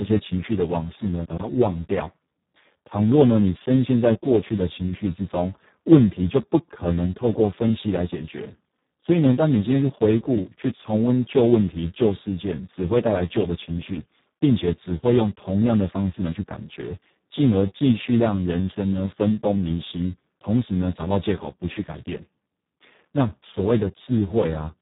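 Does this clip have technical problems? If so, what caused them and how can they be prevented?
Yes. Throughout the clip the speech sounds hoarse, buzzy and close to robotic, and it is dull, with nothing above about 3.8 kHz. This is Speex codec damage at a very low setting, one that points to a rate of around 4 kbps. At that rate the CELP coder has almost no bits left for the excitation signal, so it rebuilds the voice from a crude, vocoder-like source and cuts off the upper band. Prevention: encode at a higher Speex quality, or use a modern codec such as Opus.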